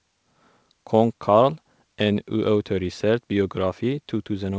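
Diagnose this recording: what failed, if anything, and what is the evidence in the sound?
Nothing failed: the speech carries through a call path with no content above 8 kHz, which points to a wideband codec such as G.722 at 64 kbps, and no stage from capture to playback shows a fault.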